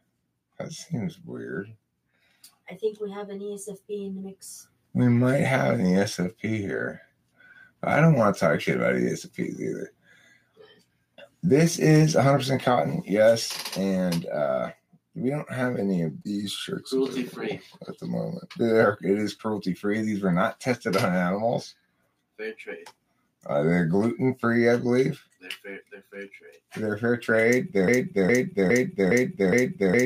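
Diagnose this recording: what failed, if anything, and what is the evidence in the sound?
From 27.88 s to the end, a 0.41 s chunk repeats back to back five times: a broken-record loop, likely a stalled player or stream buffer replaying its last fragment.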